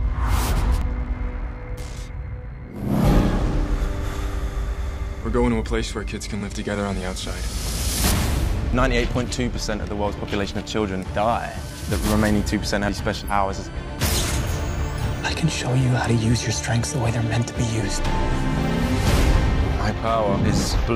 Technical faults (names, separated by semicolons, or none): compressed frames skipped; switching supply whistle